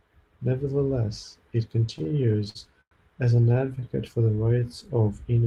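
From 1.93 to 2.93 s and again from 3.37 to 3.84 s, repeated stalls (stutter) occur as late packets empty the jitter buffer, which fills each gap by continuing the last sound. The result drags and judders, seen as repeated, smeared spectrogram slices. The first span has eleven gaps, the longest about 0.1 s, and the second has nine brief ones.

From 4.25 to 5.03 s, a jitter buffer slow-down repeats pitch periods, adding about 0.1 s and running at 88% speed. Sounds stretch at unchanged pitch, with regularly repeating waveform cycles.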